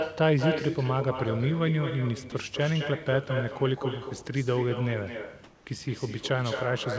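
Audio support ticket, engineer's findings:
Speech shadowed for the whole clip by a quieter, thinner copy, about 8 dB down and trailing by around a fifth of a second. Echo with no canceller: far end playing the call on a loudspeaker, its mic picking it up, nothing subtracting it, so the return comes back after the network round trip.

Brief gap at 2.30 s: a sliver of speech, roughly 10 ms, swapped for a 20 ms patch of steady noise. Likely sound dropped by the voice detector: sender misjudged a quiet moment as background, stopped sending, and the receiver filled in comfort noise until the detector retriggered.

5.44 to 5.66 s: room background, about 30 dB below the loud passages, turns flat and featureless for 220 ms at unchanged level, then real background returns. Likely comfort noise in place of the background: sender in discontinuous transmission, receiver synthesising noise shaped to the room's. 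Room noise itself sits about 32 dB under speech. Band tops out near 8 kHz, consistent with a G.722 wideband call path.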